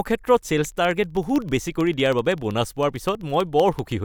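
From 0.72 s to 3.98 s the speech carries a steady train of ticks, one every 64 ms, roughly fifteen a second, heard only while the voice is sounding. These are periodic USB or driver dropouts: something keeps stalling the USB bus or audio driver on a fixed cycle, and each stall blanks a sliver of signal, a small fraction of a millisecond, to silence. The abrupt gap and restart in the waveform produce each click.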